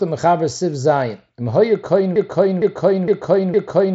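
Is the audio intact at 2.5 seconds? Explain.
No. A broken-record loop runs from 2.16 s to the end: a 0.46 s fragment repeats four times, likely from a stalled stream, showing identical repeating blocks on the spectrogram.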